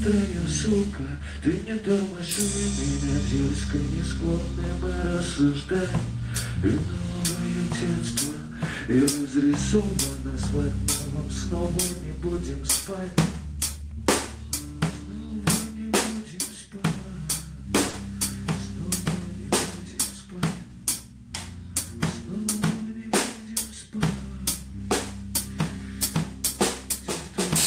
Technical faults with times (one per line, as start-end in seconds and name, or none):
0.00-27.67 clock drift between sender and receiver
0.28-16.98 repeated timing corrections
17.89-17.95 short stall from a late packet
19.20-27.24 repeated timing corrections